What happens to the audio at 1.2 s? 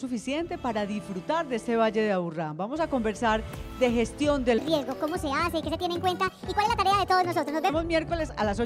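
Nothing out of the ordinary happens at 1.2 s; the audio runs through that moment intact, with no audible fault.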